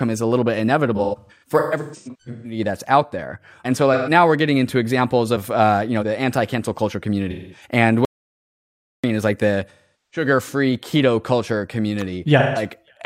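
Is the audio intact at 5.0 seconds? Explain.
Yes, the audio is intact at 5.0 seconds, with no fault to be heard at that moment.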